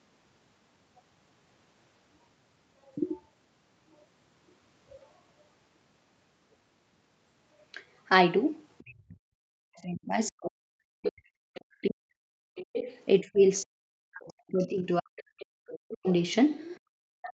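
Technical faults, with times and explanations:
8.79 s to the end: speech suppressed in double talk. The talker's voice drops sharply, by around 40 dB at worst, likely because the echo canceller muted both sides during overlap.
9.78–11.61 s: other side's voice leaking through. A second voice, nearly as loud as the talker, is audible, likely loudspeaker echo the canceller failed to remove from the microphone.
12.58 s to the end: other side's voice leaking through. The second voice returns, now well below the talker, likely residual echo left behind by incomplete cancellation.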